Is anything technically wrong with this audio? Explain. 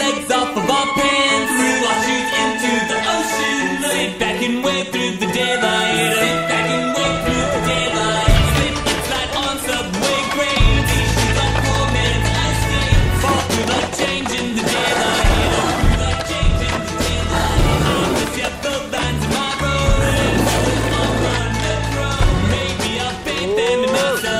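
No, nothing is technically wrong with this audio.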